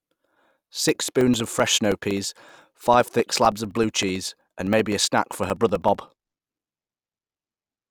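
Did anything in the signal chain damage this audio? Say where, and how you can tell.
Yes, at the driver or USB stage: periodic USB or driver dropouts run from 0.06 s to 7.81 s. Every 64 ms a couple of milliseconds of the speech is blanked to silence, around a hundred times, giving steady ticks. That's a background task stalling the audio path on a fixed cycle.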